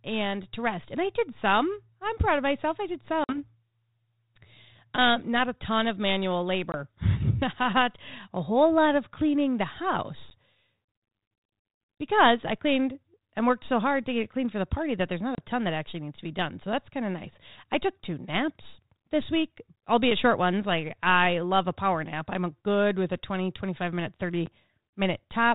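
Speech, carried over what sounds like 32 kbit/s G.726 ADPCM with nothing above 4 kHz, suffers packet loss on an ADPCM call. Hard-edged silent holes fall at 3.24–3.38 s after "of myself I did", 6.72–6.77 s after "a ton of manual", 10.30–10.34 s, 15.35–15.39 s before "ton that actually needs", and 24.46 s. The longest loses 50 ms. After each hole, the decoder's predictor and step size no longer match the sender's. The sound returns briefly and slightly distorted, then settles.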